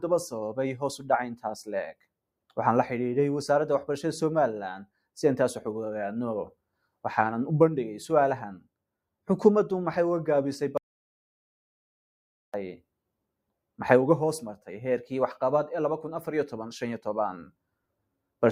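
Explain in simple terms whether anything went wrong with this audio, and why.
Something did go wrong: there's an audio dropout to silence from about 10.78 s to 12.54 s. The sound cuts off abruptly, and for roughly 1.8 seconds there's nothing at all, not even the faint background hiss you'd normally hear, before it snaps back mid-flow. That kind of dead-flat gap most likely means the input dropped out briefly, say a loose connection or an accidental mute, while the recorder kept writing pure silence. Whatever happened during that stretch is simply lost.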